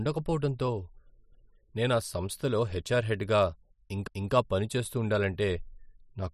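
Speech, with an overlapping chunks fault from 4.07 to 4.33 s, just before "పనిచేస్తూ ఉండాలంటే": a 250 ms piece plays twice at a join between chunks, which fits 2.5 s chunks each starting before the last ended. Unlike a dropout, nothing goes missing; the audio repeats instead.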